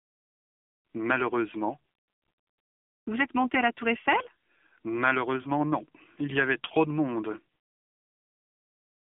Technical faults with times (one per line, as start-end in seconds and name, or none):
0.00-9.08 AMR narrowband mobile codec
5.42-5.48 lost AMR speech frames